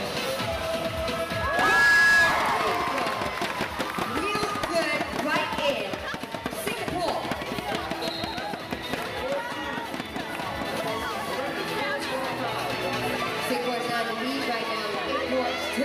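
Loudspeaker feedback squeal from 1.15 to 2.51 s: a 1.7 kHz tone swells over under a second to about 10 dB above the audio, unlike a steady interfering whistle.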